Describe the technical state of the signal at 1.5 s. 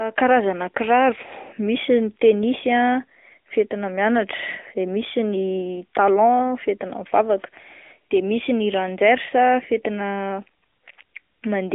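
At 1.5 s the speech carries AMR narrowband mobile codec damage, present throughout: vocal-tract modelling at a mid rate near 10 kbps adds audible buzzy, synthetic texture. Nothing passes above 4 kHz, and the band runs from 250 Hz to 3.5 kHz. That coding texture is what separates it from a plain telephone band-limit.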